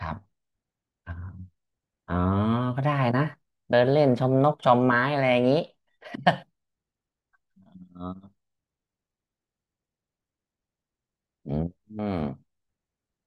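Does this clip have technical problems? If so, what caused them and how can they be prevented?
Yes. From 5.25 to 6.30 s there's channel delay (comb filtering). One channel runs about a sample late, and summing to mono cancels around 20 kHz, so the top end dulls slightly. Keep channels sample-aligned and check mono compatibility before summing.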